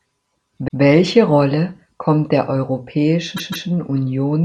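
Speech clip with two stutters from repeated frames, where a short run of compressed audio gets decoded more than once. At 0.67 to 0.80 s a 131 ms stretch plays one extra time, which fits a run of about five frames. At 3.36 to 3.67 s a 157 ms block comes round twice more, about six frames' worth, adding 314 ms. So the clip ends up roughly 0.44 s longer than it should be.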